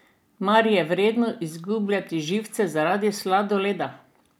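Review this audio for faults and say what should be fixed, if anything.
Nothing to fix: no technical faults turn up anywhere in the speech.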